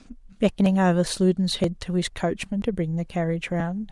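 A speech clip with audio missing between chunks: brief skips at 0.66, 1.64, 2.62 and 3.60 s, each dropping roughly 20 ms, likely lost as the recorder closed one 1-second chunk and opened the next. Unlike dropouts, no silence fills the gaps, and unlike random loss, they recur evenly.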